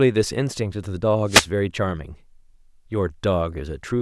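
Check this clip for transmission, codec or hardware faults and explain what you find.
One fault is present: a wireless microphone noise hit. It runs from 1.27 to 1.47 s, about 0.2 s in all. It is heard as a brief burst of static, like a short swish. The cause is a fade in the analogue FM radio link. Reflected copies of the signal arrive out of phase and cancel at the receiver. Receiver noise then rises over the speech for that moment, and the speech returns once the signal recovers.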